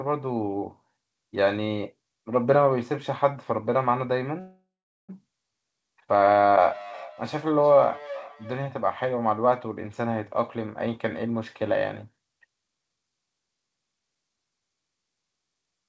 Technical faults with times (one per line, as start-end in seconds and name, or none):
4.40-5.10 call audio freeze
6.69-8.65 feedback echo between two devices
10.32-11.63 jitter buffer speed-up